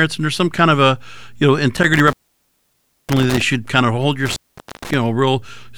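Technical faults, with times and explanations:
1.77–3.42 s and 4.26–4.94 s: intermittent contact. A loose connection opens for about 0.96 s, then 0.47 s, so the speech drops out to faint hiss, with crackle as the contact breaks and remakes.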